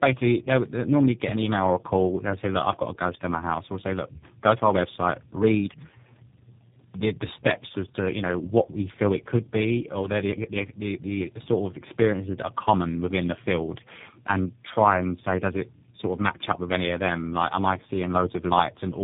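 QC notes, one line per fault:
throughout, tandem speech coding: the call passed through three speech codecs in a row, ending in G.729A, each recoding prior damage, so speech sounds rough, muffled and warbly, nothing above 3.7 kHz.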